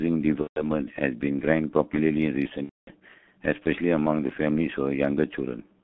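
Throughout, the speech sounds muffled and hoarse with smeared consonants, the mark of heavy G.723.1 codec damage at about 6.3 kbit/s, which discards everything above 4 kHz.

From 0.41 to 0.69 s and again from 2.64 to 2.91 s, the sound stretches into a buzzy tone or coloured noise that fades. This is VoIP packet loss concealed by the speech codec. The decoder extrapolates from its last frame while gaps fitting roughly five and eight missing 30 ms frames pass.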